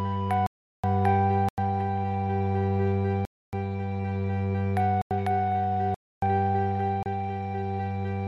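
The music keeps dropping into a block of digital silence: 0.46 to 0.84 s (about 370 ms), 1.49 to 1.58 s, 3.25 to 3.53 s, 5.02 to 5.11 s, 5.94 to 6.22 s, and a brief 30 ms hole at 7.03 s. Output samples were zeroed, probably because the buffer wasn't filled in time. The two 93 ms gaps fit 4096-sample blocks, and the first one fits 16384. There's no fade, and the longer gaps come across as hard holes in the music.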